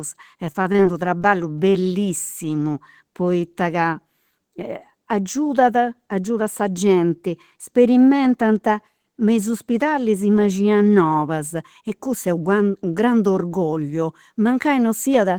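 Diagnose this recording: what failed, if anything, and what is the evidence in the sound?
Repeated packet loss on the network path from 0.47 to 1.26 s: eight gaps, the longest 23 ms, each patched by extending prior sound, giving choppy, robotic speech.

Short concealed packet loss, also network, from 1.70 to 1.74 s: about 20 ms went missing and was filled by continuing the preceding sound, heard as a brief smear.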